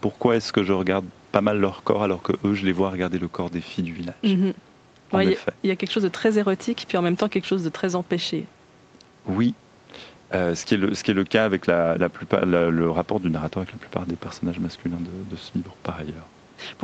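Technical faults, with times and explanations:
No faults found; the speech carries nothing above 8 kHz, as expected from the call microphone processing and the Opus call path's 8 kHz bandwidth.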